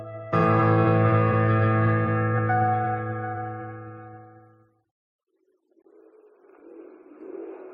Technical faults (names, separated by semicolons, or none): gap at a join of encoded pieces